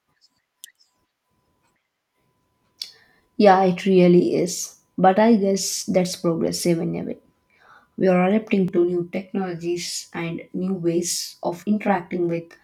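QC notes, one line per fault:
8.68–12.63 s, channel delay (comb filtering): after "are adapting", one channel lags about 20 ms and the mono sum turns rough and slightly doubled, with fixed notches from near 30 Hz. Unlike flanging, the notches never sweep.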